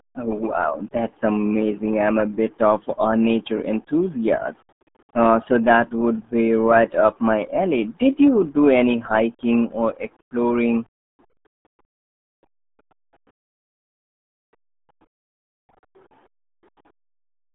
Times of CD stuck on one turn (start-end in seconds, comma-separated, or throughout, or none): none